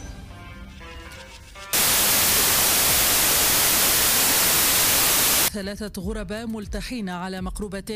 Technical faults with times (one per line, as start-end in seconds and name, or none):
1.73-5.48 wrong sample width